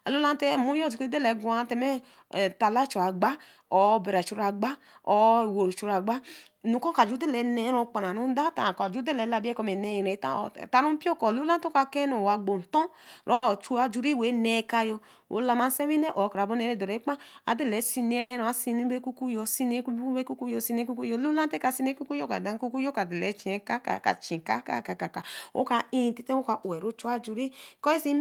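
At 13.33 to 13.44 s there is a short stall from a late packet. A packet missed its playout slot, the jitter buffer ran dry, and the receiver held the last sound for 90 ms until the packet arrived. Speech then resumes exactly where it paused, with nothing lost, so the only sign is one sound held too long with a slight buzz or dip.

From 15.38 to 16.72 s comes a jitter buffer speed-up. The buffer was holding more audio than its target, so the receiver trimmed many tiny pitch-period slices to shed roughly a tenth of a second of delay. Speech plays at about 106% speed with its pitch unchanged. It sounds slightly rushed rather than higher, and that steady pitch is what tells it apart from a simple resampling error.

At 18.19 to 18.32 s a call audio freeze follows. The last sound is carried on as a fading buzz or hiss for 110 ms without ever dropping to silence, and then speech resumes from where it stopped with nothing missing. 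The likely cause is packets delayed in transit that emptied the jitter buffer. Compared with the earlier stall, this fill is longer and audibly fades, which makes it sound more like a brief freeze than a single stretched sound.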